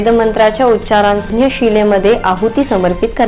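A skip ahead at 1.30 to 1.32 s makes playback leap forward with no gap. About 0.7 s of audio was dropped while later audio was already queued, either lost in transit or thrown out by an overflowing jitter buffer. The two sides of the cut are joined almost directly, so a chunk of sound simply vanishes and the delay falls by roughly the same amount.

Jitter buffer speed-up runs from 1.40 to 2.95 s. The receiver's buffer held more audio than its target, so it trimmed short slices of one or a few pitch periods, over and over, to bring the delay back down. In total about a tenth of a second is removed, and playback runs at about 107% speed with the pitch unchanged. The result sounds slightly hurried. Throughout, the audio has the narrow telephone-band character of a call codec, with nothing above 4 kHz, which fits G.711 A-law at 64 kbps.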